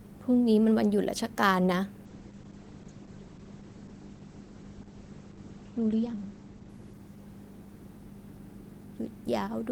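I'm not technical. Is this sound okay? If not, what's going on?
No. From 2.07 to 8.51 seconds there is a call bitrate drop. The connection weakened, so the voice was squeezed into far less data. Speech sounds muffled and rough, losing sharp detail above about 8 kHz, worst for roughly three and a half seconds.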